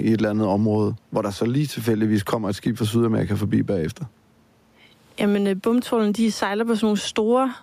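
Gain pumping runs through the whole clip. The likely cause is input gain set far too high for the microphone, with a fast limiter or compressor clamping down whenever the speech gets loud. The level swings by around 10 dB, and the room noise sits about 45 dB below the speech. Loud and quiet passages are squeezed toward one level, so the speech sounds flattened.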